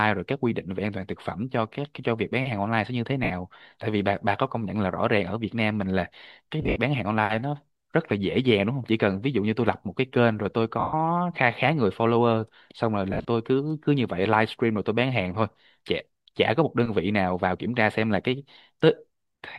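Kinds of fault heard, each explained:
lost LE Audio frames: the Bluetooth link dropped chunks of audio, and the LC3 decoder covered each gap by replaying the last spectrum with randomised signs and fading it, so you get brief hissy smears instead of clean dropouts. There are four: about 60 ms at 3.24 s, 130 ms at 10.80 s, and two scattered patches starting at 6.62 and 13.11 s, each spread over 160 ms, with longest runs of roughly 70 ms and 30 ms.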